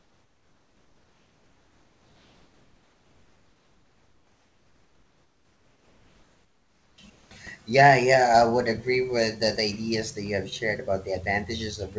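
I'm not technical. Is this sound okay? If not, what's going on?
No. The real room background is replaced by comfort noise from the start to about 7.0 s, and again from 7.10 to 7.31 s. The call likely stopped sending sound during pauses. The receiving end filled the gaps with a flat, slightly quieter hiss.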